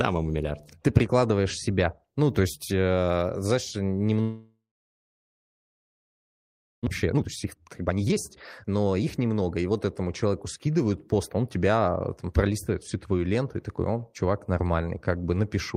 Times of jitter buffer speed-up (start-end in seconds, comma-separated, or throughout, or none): 6.90-9.71